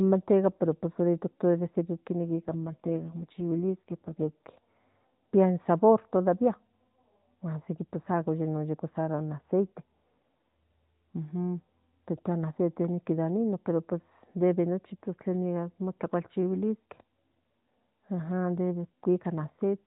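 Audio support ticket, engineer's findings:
AMR rate drop, 2.22–4.49 s. Voice turns rougher, buzzier, more synthetic, with no gap and no change in band. The degree of roughness fits a switch from 12.2 to 5.9 kbps, the network trading speech bits for error protection on a weak link. AMR-NB path, band capped at 4 kHz.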